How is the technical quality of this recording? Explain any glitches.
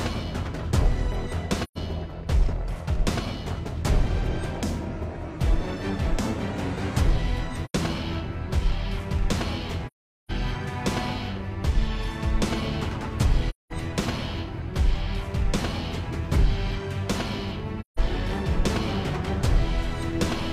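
Five dropouts mar it: AAC frame loss with muting at 1.63–1.78, 7.65–7.74, 9.87–10.32, 13.50–13.72 and 17.80–17.99 s. Lost frames were decoded as silence. Overlapping windows fade each gap, leaving soft-edged holes of 85 to 427 ms.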